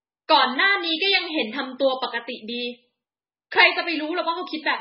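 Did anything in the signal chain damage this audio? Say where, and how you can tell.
Yes, at the codec stage, throughout the speech. Nothing survives above 5.6 kHz, and the remaining sound is heavily watery and swirly, pointing to a very low bitrate near 16 kbps. This is likely MP3 compression starving weak frequency lines so they flicker between frames, which a plain low-pass filter wouldn't cause.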